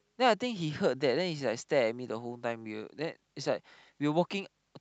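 Nothing stood out on listening to the speech in this recording.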